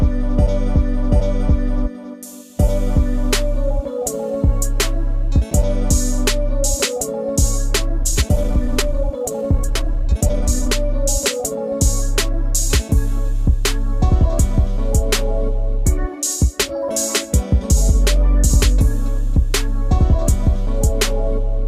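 From 7.95 to 10.73 s there's a time-stretched section: the pace suddenly runs about 1.53 times faster with unchanged pitch, likely software squeezing it to fit.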